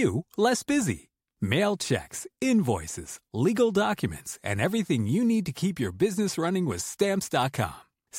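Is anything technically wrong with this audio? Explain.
No, nothing technically wrong can be heard in this speech recording; the signal stays steady and intact throughout.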